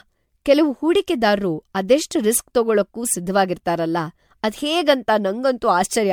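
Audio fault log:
throughout generation loss: swirly, hollow, smeared speech with blurred onsets, likely from about four successive MP3 encodes fitting 96 kbit/s, each re-quantising on a shifted frame grid. A spectrogram shows speckled noise and growing spectral holes up to 20 kHz.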